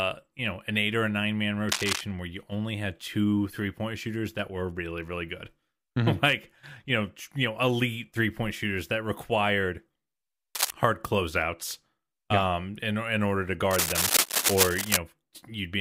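At 1.69 to 2.01 s, after "or a nine man", a burst of cable scratch noise rustles over the speech, returning briefly from 10.55 to 10.71 s before "hard closeouts yeah um" and at length from 13.71 to 14.97 s after "in in order to". Each burst is dense, uneven and roughly as loud as the speech, likely from a worn cable or connector being moved. Its irregular scraping texture distinguishes it from steady hiss or isolated clicks.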